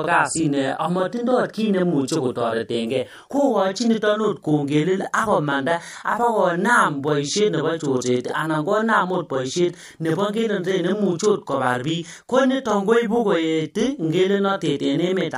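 Throughout the speech, channel delay (doubling) is present: one channel arrives about 40 ms behind the other, and when the two are summed to mono the late copy sits alongside the original at equal level, giving a constant doubled, slapback quality to every syllable.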